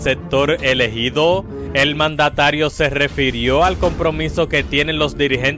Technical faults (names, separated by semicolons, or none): none